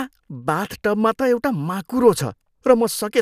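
Nothing here to flag: the speech runs along without any technical faults turning up.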